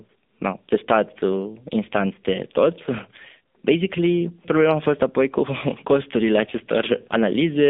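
From start to end, the speech carries AMR narrowband mobile codec damage. Nothing passes above 3.6 kHz or below 200 Hz. Each 20 ms frame is rebuilt from a vocal-tract model and sparse pulses. The result sounds buzzy and synthetic, which fits a rate near 7.4 kbps.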